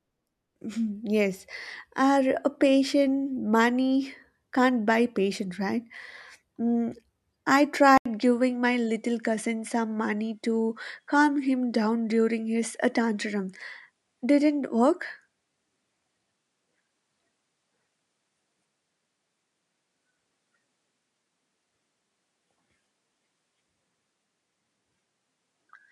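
Speech clip. At 7.98 s an 80 ms gap opens, and from there to the end everything above 11.4 kHz is gone and a faint new noise floor appears, with level unchanged. This likely reflects an input switched to a poorer device mid-recording.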